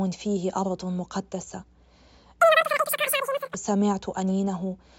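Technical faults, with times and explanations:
2.40 to 3.54 s, wrong sample rate: the speech suddenly jumps up and races, running about 2.76 times too fast and roughly 17.6 semitones higher, so it comes out squeaky and hurried. The samples are being played out faster than they were captured, with no rate conversion in between, so speed and pitch rise together by the same ratio. That ratio fits 16 kHz material going out at 44.1 kHz.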